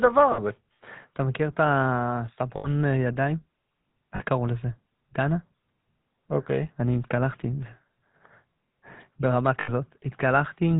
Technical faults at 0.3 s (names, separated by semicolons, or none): GSM full-rate codec; lost GSM frames